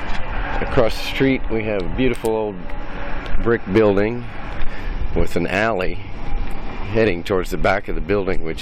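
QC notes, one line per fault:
Nothing stood out on listening.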